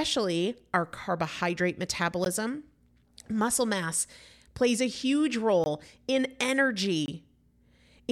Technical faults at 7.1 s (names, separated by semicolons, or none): block of digital silence